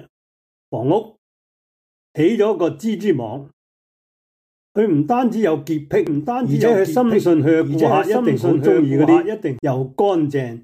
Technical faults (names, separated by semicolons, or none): doubled audio track